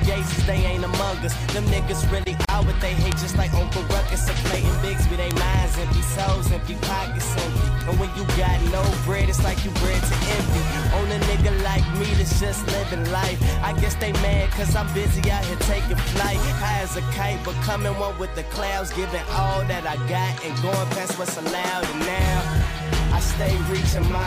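At 2.45 s a gap at a join of encoded pieces opens. The sound stops for about 37 ms, to 2.49 s, then resumes where it left off. Two separately encoded pieces were joined untrimmed. Encoder delay and last-frame padding remain as silence, with smeared edges.

Bit error spikes follow at 3.12, 4.09, 5.31, 7.81, 14.01 and 15.24 s. Each is a single sharp, broadband tick unrelated to the sound. A flipped bit made a sample value jump by a power of two and return. Their brevity fits one to three corrupted samples each.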